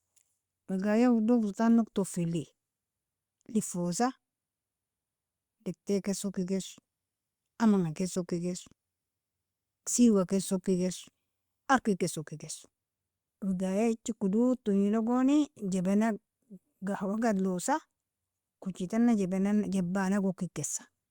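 Speech recording; no audible technical faults found.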